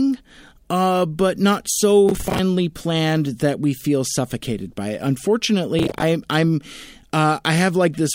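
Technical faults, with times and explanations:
2.09–2.39 s and 5.79–6.03 s, processor overload crackle: many short buffers of about 10 ms miss their deadlines, replaying stale audio with hard edges, heard as gritty tearing bursts.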